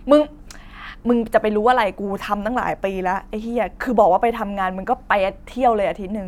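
No audible technical faults are present in this speech recording.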